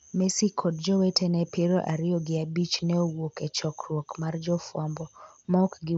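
There are no technical faults to describe in this speech; it arrives through a Bluetooth mSBC headset link, with its content stopping at about 7.7 kHz.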